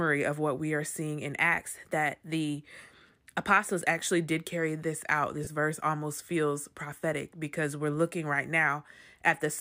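From 1.38 to 3.86 s, after "we are seeing in", a clock-matching drift correction step likely jumped the playback rate, speeding speech 5.35% and raising pitch about 90 cents until "actually did carry this".

At 5.44 to 5.47 s, between "did carry this out" and "verse almost feels prophetic", 30 ms of lost LE Audio frames, fitting three 10 ms frames, let the LC3 decoder recycle the previous spectrum, leaving a brief noisy smear.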